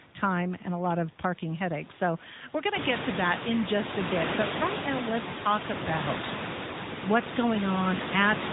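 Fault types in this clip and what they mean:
AMR narrowband mobile codec, throughout the clip: the speech has passed through the AMR-NB mobile codec, which samples at 8 kHz and rebuilds the voice from a vocal tract model driven by a pitch predictor and a few pulses every 5 ms, so nothing above 4 kHz survives. The damage is plainly audible as a buzzy, synthetic voice, which fits a mid rate around 10.2 kbps. The room noise that rises at about 2.5 s passes through this codec as well.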